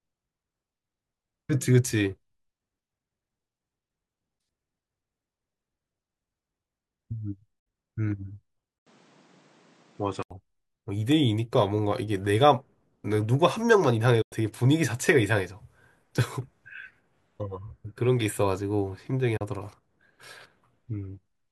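At 7.59 s there's a digital broadcast dropout. The receiver mutes with a quick 8 ms fade and the sound is gone until 7.67 s. That 64 ms hole fits two lost 32 ms frames, and whatever was sent in that gap never comes back.

From 8.79 s to 10.31 s the sound goes dull after a brief 80 ms silence at the switch. Nothing comes through above 9.3 kHz, and a new noise floor sits roughly 35 dB down, though the level hardly changes. That's likely an input switched to a poorer device.

Two more dropouts of the same kind follow. One runs from 14.22 s to 14.33 s, a 96 ms gap matching three lost frames, and a shorter one from 19.37 s to 19.42 s is about a single 32 ms frame. Both have the same quick fade into silence.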